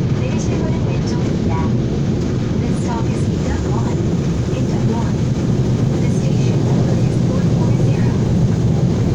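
No technical faults are audible anywhere in the recording.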